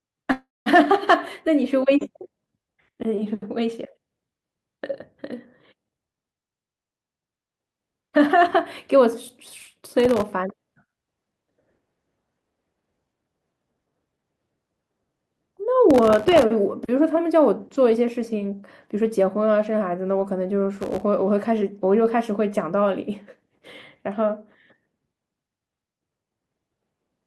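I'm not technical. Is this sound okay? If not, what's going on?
No, there are three kinds of problem in this speech.

From 0.31 to 0.69 s there is a call audio freeze. The sound just before it is drawn out into a fading buzz, then goes quiet for about 0.19 s, and the speech resumes exactly where it stopped. The likely cause is that pieces of the call were held up on the way, so the receiver ran out of audio and filled the wait. Nothing is lost; the speech is simply pushed later by about a third of a second. That one long stretched pause is what sets it apart from the crackle below.

Processor overload crackle comes at 9.11 to 10.33 s, 15.91 to 16.42 s and 20.75 to 21.03 s. The device handling the audio was too busy to keep up, so it kept missing its deadlines for tiny slices of sound, each only a couple of thousandths of a second long. Dozens of those little dropouts in a row are heard as a gritty, tearing crackle on top of the speech. 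Unlike the freeze, there is no single pause, just rough noise that stops when the strain passes.

A jitter buffer speed-up happens from 13.07 to 14.23 s. The receiver had built up more stored audio than it wanted, so it trimmed out many tiny slices to catch up, about a third of a second in total. The speech there runs roughly 23% faster and sounds hurried, but the pitch stays the same, so it does not turn squeaky the way a sped-up recording would.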